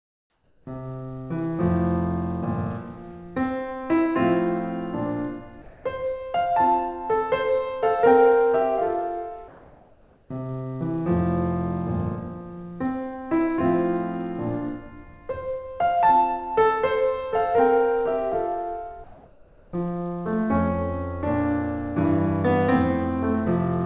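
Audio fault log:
0.00–0.66 s, 5.62–5.84 s, 9.48–10.30 s, 19.04–19.72 s: comfort noise in place of the background. Quiet stretches of the music become steady, featureless hiss, about 2 dB lower in the first two. This is likely from discontinuous transmission. Unlike a dropout, the gap is filled rather than silent.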